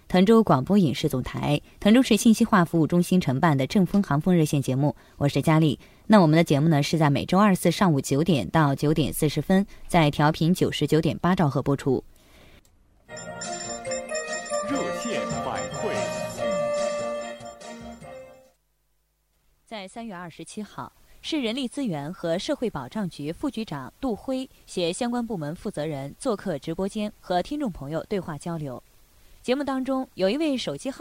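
Nothing technically wrong turns up anywhere in this audio, so there are no problems to point to and no causes to chase down.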